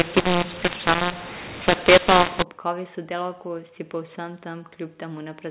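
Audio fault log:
0.00–2.42 s, mu-law and A-law mixed up: the speech sounds harsh and distorted. Telephone samples coded with A-law are decoded with the mu-law curve. Levels come out scrambled, some too loud, others too soft. The quietest samples rise above silence, so pauses fill with noise.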